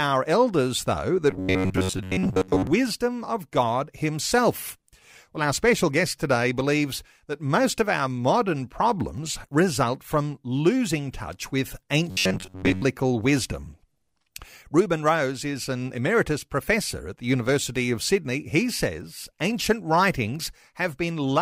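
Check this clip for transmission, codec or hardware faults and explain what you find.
There's one fault here, and it shows up twice: robotic sound from repeated short buffers, from 1.31 to 2.67 s and again from 12.11 to 12.82 s. The speech collapses into a stiff, metallic buzz at about 93.8 Hz that still tracks the speech loosely. That's likely a stalled stream where a roughly 10.7 ms chunk gets replayed for most of each stretch instead of fresh audio.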